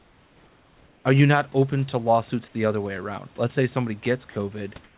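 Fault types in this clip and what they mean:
Sound dropped by the voice detector: right after "say somebody", at 4.3 s about 60 ms turns into flat noise, losing about 50 ms of speech, likely the detector mistaking a soft ending for background.
Comfort noise in place of the background: from 4.84 s to the end, the room sound gives way to steady, featureless noise about 2 dB quieter, likely synthesized during a transmission pause.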